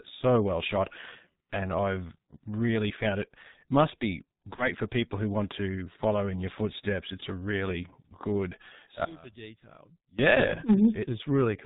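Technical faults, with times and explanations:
throughout G.723.1 codec: The speech was squeezed through an early internet-telephony coder whose rate sounds like it fits roughly 6.3 kbit/s, working in 30 ms blocks with a slowly updated model of the voice. Nothing above 4 kHz survives, so the speech is muffled and dull. The coarse, lagging voice model leaves a hoarse, rasping texture, and consonants smear into one another. The damage is heavy across the whole clip.
4.55 to 4.70 s VoIP packet loss concealed by the speech codec: Audio went missing in transit, which fits a single lost 30 ms frame, and the decoder filled the hole by continuing from its last pitch and filter settings while turning the gain down. The gap becomes a brief buzzy or noisy, stretched sound that fades. Because each frame is decoded from the state of the one before, the speech stays thin and distorted for a short while after the loss.
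9.05 to 10.19 s one channel inverted: The level falls by about 22 dB here, and the centred speech nearly disappears, leaving only a faint residue. This is likely caused by one stereo channel having its polarity reversed and then being summed to mono. Whatever the two channels share cancels out, and what remains is only the small difference between them. The speech returns to full level once the section ends.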